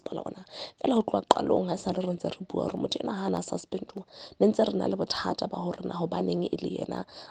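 From 0.37 s to 6.97 s a click recurs every 0.6 s, about ten in all. These are likely clock drift buffer slips, where a clock mismatch of a few hundred ppm drops or repeats a handful of samples. A spectrogram shows thin, evenly spaced vertical broadband lines.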